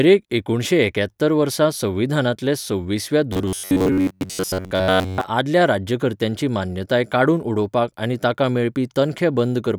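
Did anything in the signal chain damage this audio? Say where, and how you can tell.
Yes. Robotic sound from repeated short buffers runs from 3.33 to 5.29 s. Throughout that stretch the speech becomes a rigid, metallic buzz pitched at 93.8 Hz, still loosely tracking the syllables. The stage is likely the driver or audio buffer. When fresh samples arrive too late, the same fragment of roughly 10.7 ms gets replayed in place of the missing audio, and most of the passage ends up as repeats. The fixed repetition rate imposes that steady pitch.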